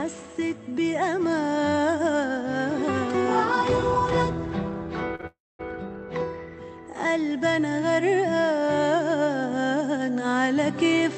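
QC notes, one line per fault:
5.15 to 5.21 s and 5.21 to 5.25 s, short stall from a late packet: two back-to-back holds, about 36 ms and then 17 ms, where the sound is drawn out with a faint buzz or dip while the jitter buffer waits, and playback then resumes with nothing lost. Unlike a freeze, these stretches are too brief to fade toward silence.
5.27 to 5.61 s, call audio freeze: a stall of about 324 ms, likely from packets held up in transit that emptied the jitter buffer. The last sound is continued as a fading buzz or hiss that decays into roughly 230 ms of silence before the audio picks up exactly where it stopped. The long silent tail and the added gap set it apart from the short stalls just before, which only stretch the sound slightly. This comes through the Opus call path, which passes content up to about 8 kHz.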